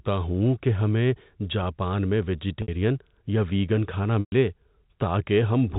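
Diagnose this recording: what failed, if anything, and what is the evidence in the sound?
The network stage dropped packets, concealed by packet loss with pitch repetition. At 2.62 s, a 60 ms gap sounds held and buzzy. From 4.20 to 4.32 s, 120 ms is lost. The repeated pitch fades out, then speech cross-fades back.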